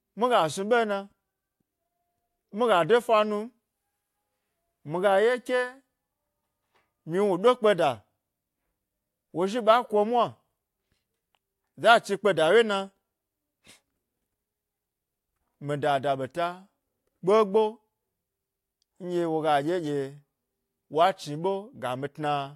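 No technical faults can be heard in this speech recording. The signal continues without any event worth flagging at any point.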